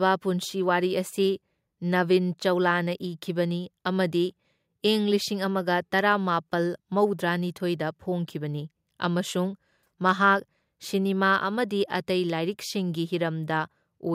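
No technical faults are audible anywhere in the recording.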